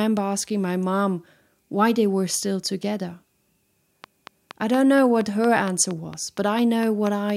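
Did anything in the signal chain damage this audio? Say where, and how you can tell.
Yes. A train of clicks runs from 4.04 s to 7.31 s, about fifteen sharp ticks at a regular rate of 4.3 per second. Each one has much the same shape and stands roughly 10 dB above the speech, and they carry on through the pauses as well. Since the pulses sit on top of the signal rather than distorting it, the likely cause is interference picked up in the analogue wiring, or an interface stage periodically injecting a transient.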